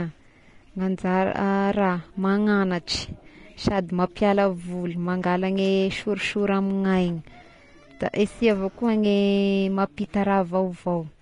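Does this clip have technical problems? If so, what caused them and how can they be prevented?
Yes. Vorbis compression throughout: the speech sounds hissy and grainy, with nothing above 10.5 kHz and smeared consonant onsets. This likely comes from a low-quality Vorbis encode, roughly fitting 33 kbps, where the treble detail is quantised into noise. Prevent it by encoding at a higher Vorbis quality setting or keeping a lossless master.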